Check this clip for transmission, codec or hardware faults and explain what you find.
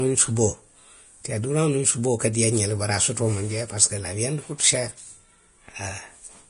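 One codec fault runs through the whole clip.

Vorbis compression, throughout: the sound is likely low-bitrate Vorbis coding, fitting roughly 32 kbps. Nothing remains above 10.5 kHz, and the coarsely quantised upper band turns fine detail into matching noise, so the speech sounds hissy and grainy, with rough tones and smeared consonant onsets.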